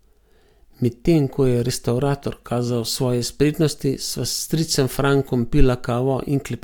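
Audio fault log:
Nothing turned up on this speech clip, so there's nothing to log here.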